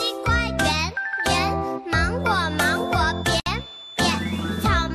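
From 2.16 s to the end of the clip, a thin, steady tone at 3.5 kHz sits behind the sound, roughly 20 dB below it and swelling and fading slowly in level without building up. This is a feedback whistle, likely from a loudspeaker-to-microphone loop held just at the edge of instability, so that one frequency keeps ringing but never runs away. Within that stretch, at 3.40 s, the sound drops out for 62 ms and resumes at 3.46 s from where it stopped, with smeared edges. That is a gap at a join of encoded pieces: separately encoded segments were spliced without trimming, so the encoder's start-up delay and the padding of the final frame remain as silence in otherwise continuous audio.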